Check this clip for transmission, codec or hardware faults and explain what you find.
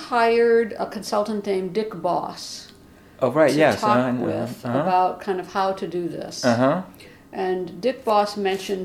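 No faults detected here.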